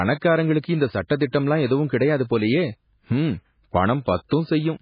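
A short speech recording with heavy codec damage throughout, likely MP3 compression at a very low bitrate around 16 kbps: nothing survives above 5 kHz, so a spectrogram shows a flat ceiling there, with watery, swirling texture from weak frequency lines flickering in and out. Pre-echo appears twice, a short hiss smeared about 25 ms ahead of attacks at 1.31 s, just before "எதுவும் கிடையாது போலயே ஹம்ம்", and at 4.29 s, visible as a low haze preceding each onset.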